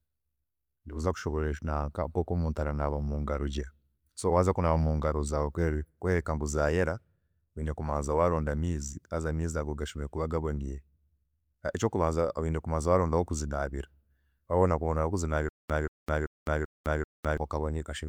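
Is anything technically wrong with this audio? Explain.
Yes. From 15.49 to 17.4 s, a stutter with silent gaps: a 181 ms speech fragment repeats five times every 387 ms, likely a stalled stream replaying its buffer. The waveform shows identical blocks separated by flat 207 ms digital silence.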